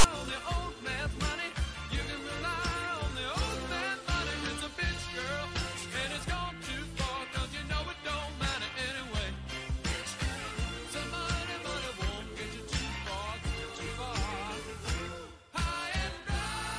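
At the very start, from 0.00 to 0.04 s, file tags are played as audio: a block of text metadata is read as if it were samples, giving a loud, one-sided rasp. Its hard-edged, static-like texture marks it apart from a simple click or thump.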